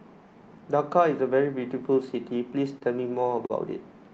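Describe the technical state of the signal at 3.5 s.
A short stall from a late packet sits at 3.46 to 3.52 s: the jitter buffer ran dry, so the receiver stretched the preceding speech by about 39 ms until the packet arrived. Nothing is lost, but that sound is held too long, with a faint buzz or dip, and everything after it runs 39 ms later.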